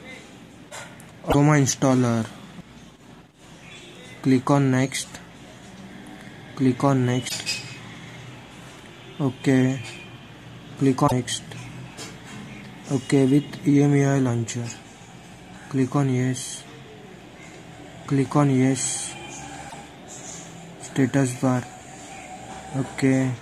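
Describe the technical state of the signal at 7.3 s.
Damaged data in a compressed stream occurs from 7.25 to 7.32 s, a burst of about 70 ms. Across that span the encoded bytes no longer match what the decoder expects, so it misreads or rejects the affected frames, loses its lock on the frame structure and hunts for the next valid header before resuming. What reaches the ear is a chirp, squawk, click or short hole that cuts across the sound.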